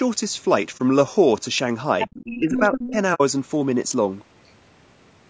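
Throughout the speech, the encoding likely used low-delay AAC compression at a low bitrate, something like AAC-ELD at 32 kbps. At that bitrate the voice's harmonics cannot be coded cleanly, so there is plainly audible codec damage: a rough, grainy texture with noise filling the gaps between harmonics and a top end that sounds thin and somewhat synthetic. The call chain's microphone processing limits the band to nothing above 8 kHz.

At 0.77 to 0.80 s there is AAC frame loss with muting. A stretch of coded audio never reached the decoder, which zeroed that spectrum and let the overlapping windows fade out and back in. The result is a soft-edged 30 ms hole, which points to a single missing frame.

From 2.01 to 2.38 s the other side's voice is leaking through, likely because the echo canceller left some loudspeaker pickup in the microphone signal. This second voice sits roughly 10 dB below the talker. 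It returns from 2.57 to 2.92 s at a similar level, and again as a barely audible scrap at 4.46 to 4.51 s.

Around these leaks, the speech is suppressed in double talk. Faced with both voices at once, the canceller likely turned the talker down as well. At 2.06 to 2.11 s this produces a brief, deep cut close to silence. From 2.38 to 2.96 s there is a longer dip of roughly 20 dB, lasting a few hundred milliseconds.

A second case of AAC frame loss with muting falls at 3.14 to 3.21 s. The decoder again silenced missing data behind smooth window fades, this time leaving a 60 ms gap. A hole that long fits two consecutive lost frames, and it is clearly longer than the first dropout.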